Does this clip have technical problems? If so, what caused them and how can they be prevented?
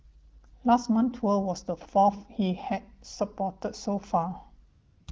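Yes. AMR comfort noise fills 4.69 to 5.07 s: the phone stopped sending speech frames for 380 ms, so synthetic steady noise replaces the real background. Relaxing or disabling discontinuous transmission would prevent it.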